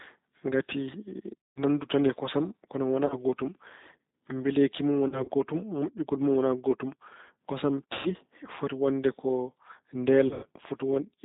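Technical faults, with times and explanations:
Throughout, G.729 codec: the speech has been squeezed through a low-rate model that keeps only a vocal tract filter, a pitch predictor and a few pulses per frame, which fits roughly 8 kbit/s. Nothing above 4 kHz survives, so the sound is band-limited and muffled, and the coarse pulse excitation makes it plainly rough and slightly synthetic rather than natural.
1.42–1.64 s, 3.06–3.17 s, 5.08–5.31 s, 7.93–8.14 s and 10.27–10.46 s, VoIP packet loss concealed by the speech codec: packets went missing and the decoder filled each gap by repeating its last pitch and filter with falling gain. The first gap covers 160 ms, the second 40 ms, and the third 80 ms scattered over 200 ms. The fourth is 120 ms, ending just before "foti wonde ko", and the fifth is 140 ms scattered over 160 ms. All of this fits 20 ms packets. The missing sound is stretched from what came before and fades out. 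Because every frame builds on the one before, the sound stays weak and distorted briefly after each gap ends.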